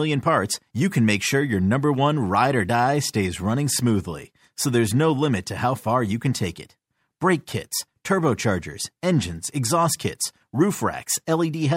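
No fault is audible anywhere in this speech recording.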